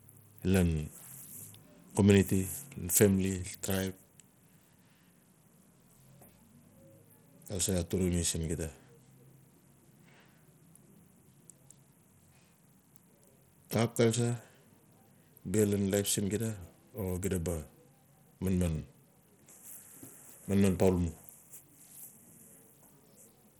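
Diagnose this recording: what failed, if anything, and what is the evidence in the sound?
The codec stage failed, with damage plainly audible across the whole speech clip. The treble is thin and unstable, dropping out and flickering rather than holding steady. A gritty noise and aliasing ride on the speech throughout. The likely cause is Bluetooth SBC compression at a starved bit pool, which fits a rate near 80 kbps. Too few bits left the top sub-bands empty or barely coded. The rest were quantised coarsely, with no hearing model to hide the error.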